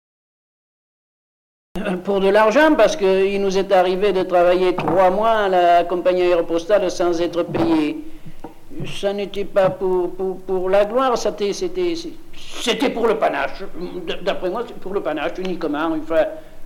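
The clip opens with digital silence from 0 to 1.76 s. At 1.76 s the sound appears abruptly, already in progress. This is a cut-off start. Capture or streaming began late, so the opening of the sound was never recorded. The audio enters mid-event. There is no natural attack and no fade-in. Instead of building up, the sound switches on instantly from dead silence, as if joined partway through.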